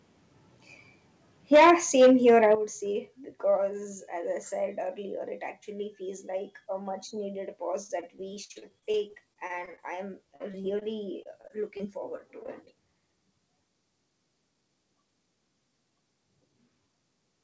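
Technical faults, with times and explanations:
1.52–1.71 s and 2.00–2.54 s, microphone overload: The loudest syllables hit the converter's ceiling, about 8 dB over in the first burst and about 6 dB over in the second. Their peaks are flattened, giving a harsh, crackling edge. On the waveform nearly a third of the samples in the first burst sit pinned flat, with only a small share pinned in the second. On a spectrogram, broadband splatter rises well above the voice harmonics. The likely cause is input gain set too high.
1.56 s and 2.55 s, microphone volume stepped down: Each overload brings a single abrupt drop in level, about 3 dB at 1.56 s and about 9 dB at 2.55 s. The voice and the background fall together, and the change does not fade in gradually. On the waveform the envelope steps down sharply at those points. On a spectrogram every band dims at once. This is likely the call software's automatic gain reacting to the clipping.
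7.84–9.80 s, 10.36–10.83 s, 11.23–11.81 s and 12.17–12.69 s, repeated packet loss (robotic sound): Audio keeps going missing, with some 17 small holes in the first stretch and four in each of the later ones. Each hole is patched by stretching the preceding sound, so the result is choppy. Between 10% and 20% of each stretch is filled this way, and the longest hole is 56 ms. On a spectrogram, harmonics smear into flat, repeated bands broken by short dropouts. The whole clip shows nothing above 8 kHz, which fits a G.722 call path.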